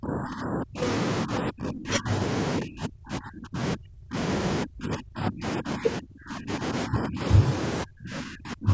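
The speech keeps ducking away at 0–0.82 s, 1.25–2.09 s, 2.59–4.16 s, 4.64–6.64 s, 6.86–7.21 s and 7.83 s onward, sometimes dropping by around 40 dB. That's likely speech suppressed in double talk: the echo canceller mistook this talker for far-end echo.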